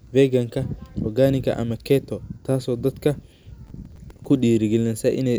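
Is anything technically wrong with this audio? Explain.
Yes. From 3.67 to 4.25 s there is processor overload crackle: around ten short buffers of roughly 5 ms arrive late and are filled with repeated old audio, giving gritty tearing rather than one clean dropout.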